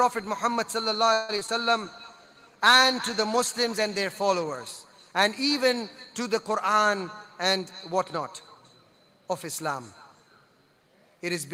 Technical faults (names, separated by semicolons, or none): repeated packet loss (robotic sound); call bitrate drop; jitter buffer slow-down; jitter buffer speed-up